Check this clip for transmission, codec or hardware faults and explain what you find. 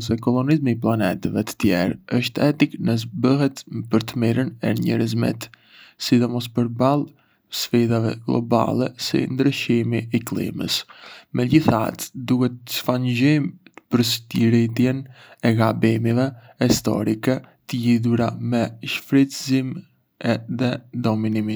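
The speech signal stays continuous and stable throughout, with nothing audible that points to a fault.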